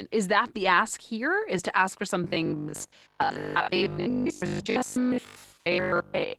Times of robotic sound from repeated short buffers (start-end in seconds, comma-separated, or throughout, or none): 2.24-6.38